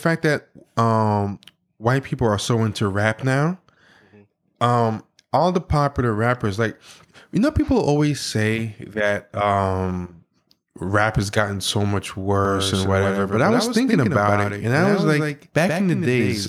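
At 12.45 s, just after "has gotten so much", a doubled audio track begins abruptly and runs to the end: a second full-band copy trails about 150 ms behind, roughly 5 dB quieter, most likely from a slower capture path. The spectrogram shows every onset repeated.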